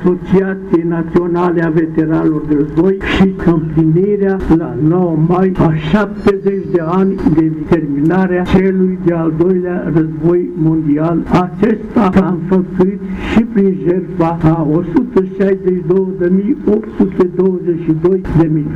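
Nothing is technically wrong with the clip.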